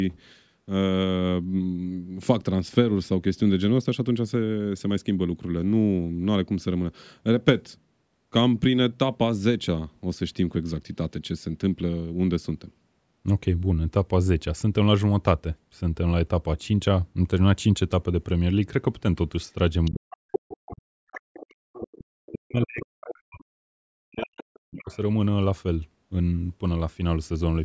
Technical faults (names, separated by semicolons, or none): other side's voice leaking through; speech suppressed in double talk; background gated by the echo canceller